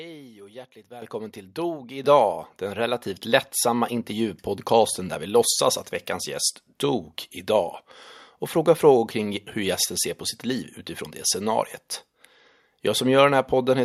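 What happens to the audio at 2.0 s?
At 2.04 s the voice and background jump about 7 dB louder together: a microphone volume stepped up, with the call software raising the input gain in a single step.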